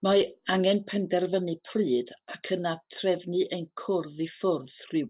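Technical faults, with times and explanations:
No technical faults can be heard in this speech.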